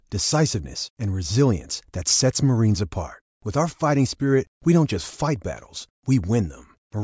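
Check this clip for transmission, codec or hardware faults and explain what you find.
No faults turn up anywhere in the recording, and the speech signal stays intact and continuous throughout.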